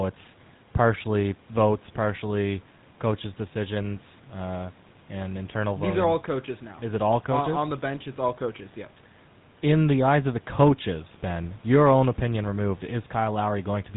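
A speech clip carrying GSM full-rate codec damage from start to finish. The voice has a buzzy, gravelly roughness that is plainly audible. The codec rebuilds speech from a vocal-tract model driven by regular pulses, and much of the excitation detail is thrown away. That coarse excitation causes the grit. Nothing comes through above 3.8 kHz, so sibilants sound dull and clipped. The bandwidth and texture fit a 13 kbps GSM stream. Faint room noise sits about 29 dB below the speech.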